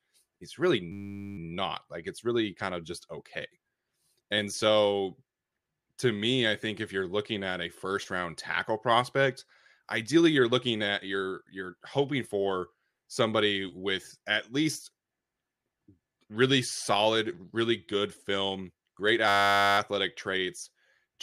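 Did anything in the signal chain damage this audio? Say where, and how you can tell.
Yes. The damage happened at the driver or buffer stage: a system hang loop, where the host or driver stalled and the sound hardware kept replaying the same 10 ms stretch of its ring buffer. It happens twice, from 0.92 to 1.38 s just after "it's really" and from 19.28 to 19.78 s just after "really good film great". Each time, the 10 ms piece repeats at 100 Hz, so it is heard as a steady buzz at that pitch. Little or no audio goes missing afterwards.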